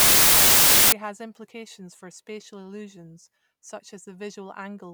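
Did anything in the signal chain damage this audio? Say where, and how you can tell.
Yes. Samples built from the wrong bytes, from 0.0 to 0.92 s, is a sample-format conversion fault. For that opening stretch the speech is replaced by loud, harsh broadband noise. Then it stops and the speech comes through. The reader assembled each sample from misaligned or swapped bytes, so the rapidly fluctuating low-order bits landed in the most significant position. The result is large random values rather than the waveform.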